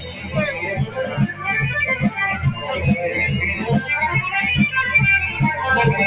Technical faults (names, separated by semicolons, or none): noise suppressor applied to music or sounds; sound cut by the noise suppressor